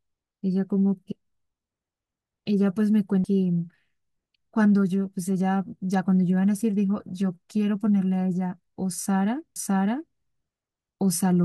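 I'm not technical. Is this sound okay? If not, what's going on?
No. There are two CD skips, at 3.24 s and 9.55 s. Each is a tiny tick and a near-instant gap, then the speech jumps to another point in the recording. A plain dropout would resume where it stopped, but here part of the speech is missed or repeated.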